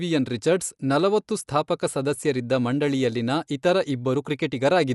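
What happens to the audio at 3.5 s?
At 3.5 s the speech sounds dull, with rough, fluttering noise around its tones, as it does throughout. Likely Dolby Digital compression at a low bitrate, fitting about 64 kbps, cutting off everything above 11.4 kHz and filling emptied bands with noise. A spectrogram shows a flat ceiling and speckled, patchy harmonics.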